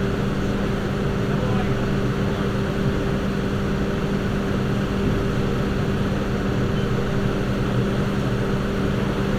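No technical faults are audible anywhere in this recording of sounds.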